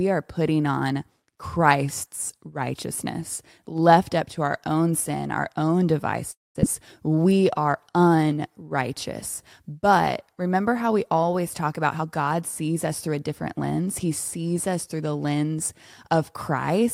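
Just after "own sin our own", from 6.31 to 6.65 s, the sound trails into a fading buzz and then falls silent for about 0.19 s. This is likely a long network dropout, not a brief packet loss, because the lost stretch is skipped.

From 7.08 to 8.64 s a jitter buffer slow-down drags the speech to 89% speed, adding 173 ms. The pitch stays unchanged, unlike a slowed playback clock.

After "we always talk about", from 11.96 to 13.72 s, a jitter buffer speed-up hurries the speech to 113%, dropping about 0.3 s. The pitch holds, ruling out resampling.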